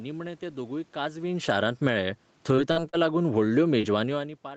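From 1.12 s to 4.27 s the speech and its background sink together by about 9 dB: automatic gain falling, as the gain control judged the input too loud or its background noise too strong. Between 2.55 s and 3.85 s the sound turns choppy and robotic with four brief holes, the longest 42 ms. This is repeated packet loss, patched by extending the preceding sound for roughly a tenth of a second in total.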